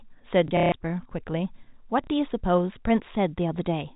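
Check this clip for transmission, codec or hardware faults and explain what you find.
Two transmission faults are audible, both packet loss with the last packet repeated, heard through the band-limited G.711 telephone sound. From 0.48 to 0.72 s, about 180 ms is lost, with the longest run 150 ms. At 2.04 s a 30 ms gap fits one lost 30 ms packet. The receiver replays the last packet, so the longer gap is filled with a robotic buzz near 33 Hz and the single gap with a small blip, rather than the silence a plain dropout would leave.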